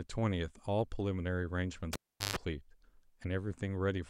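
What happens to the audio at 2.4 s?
A live cable was pulled out and plugged back in between 1.93 and 2.36 s, so 2.4 s falls just after the sound returns. Pulling the plug gives a pop, then the signal drops to near silence for about 381 ms. As the plug goes back in, its tip touches before the connection is made and picks up a 135 ms burst of 50 Hz mains buzz. A second pop at 2.36 s marks the speech coming back.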